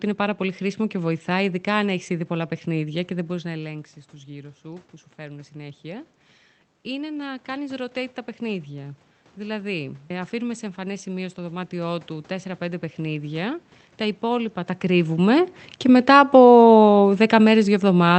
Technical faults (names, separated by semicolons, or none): automatic gain rising; automatic gain falling